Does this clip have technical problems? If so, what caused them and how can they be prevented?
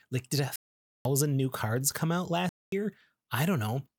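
Yes. The speech cuts out abruptly twice, from 0.56 to 1.05 s (about half a second) and from 2.49 to 2.72 s (about 0.23 s), and then resumes further along as if it had kept playing underneath. This is likely a Bluetooth dropout: audio packets failed to reach the headphones in time, so they were discarded and the output fell silent until good packets arrived. Keeping the source close to the headphones, clear of obstructions and away from busy 2.4 GHz interference should prevent it.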